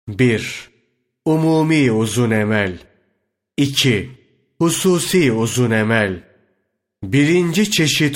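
No technical faults can be heard anywhere in the speech. There is nothing to place on a timeline or flag for closer listening.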